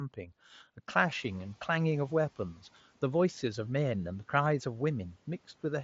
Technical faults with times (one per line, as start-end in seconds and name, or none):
1.15-1.50 noise suppressor catching up
4.45 concealed Bluetooth headset packet loss